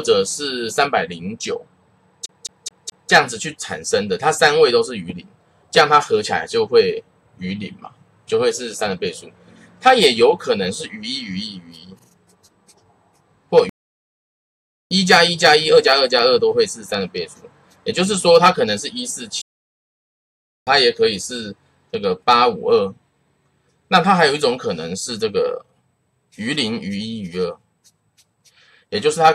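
The audio has two distinct faults. From 2.26 to 3.11 s it shows a CD stuck on one turn: a 213 ms fragment repeats four times with a brief mute at each jump, the quick, regular stutter of a laser skipping back one track at a scratch. Playback stalls occur at 13.69 to 14.91 s and 19.41 to 20.67 s, where the sound cuts out mid-flow for about 1.2 and 1.3 s before resuming. This is likely a player starved of data or blocked on its output thread.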